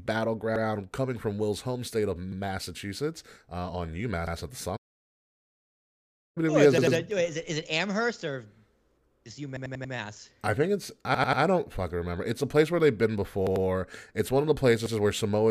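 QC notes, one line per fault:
0.56 to 14.95 s, repeated buffer: A piece of about 93 ms, which fits a 4096-sample buffer, replays with a hard join, heard as a stutter. Single repeats occur at 0.56, 2.32, 4.27 and 14.86 s. Doubles occur at 6.78 s, before "it is it", and at 13.47 s. Four repeats come at 9.57 s, before "I think it's". Three come at 11.15 s, between "I think it's" and "don't fucking remember".
4.76 to 6.38 s, playback stall: The speech stops mid-flow for about 1.6 s of silence, then resumes. The player likely ran out of data or had its thread blocked, so nothing reached the output until it recovered.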